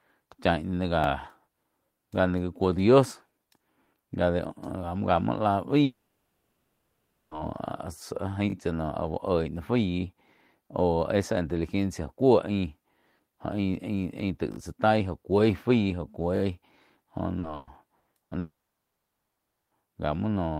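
From 5.83 to 7.34 s the sound turns into a smeared, buzzing continuation of whatever came just before, for about 1.5 s, with nothing new in it. The likely cause is a long network dropout. No fresh audio reached the receiver, so it kept extending the last sound across the whole gap, and the audio that should have been there never returns. On a spectrogram the stretch shows blurred, frozen bands with no normal changes, and the waveform has no real gap.

At 8.50–8.54 s and again at 14.52–14.58 s there is a brief stutter, close to a buzzy click. Each is a repeated buffer: a 20 ms block was played again while new audio was late, twice extra at 8.50 s and three times extra at 14.52 s. The waveform shows identical 20 ms cycles butted together with hard joins, and the spectrogram shows thin vertical seams.

From 17.39 to 18.34 s the sound turns choppy and robotic. This is repeated packet loss with a robotic sound. 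Four holes, the longest 120 ms, were each patched by stretching the previous sound, covering about a third of the span. The spectrogram shows alternating smeared and normal blocks.

Immediately after, from 18.39 to 19.74 s, the sound breaks off. A short fading buzz gives way to about 1.2 s of silence before audio resumes, with roughly 1.3 s lost altogether. The likely cause is a second long network dropout. The waveform is flat for most of the span, and the spectrogram is empty after a brief smear.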